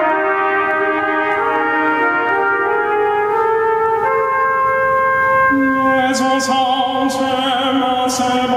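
Gain pumping runs through the whole music clip. The gain ducks by around 10 dB under each loud sound. Loud and soft passages sit too close in level. The likely cause is input gain set far too high, with a fast limiter clamping down on every peak.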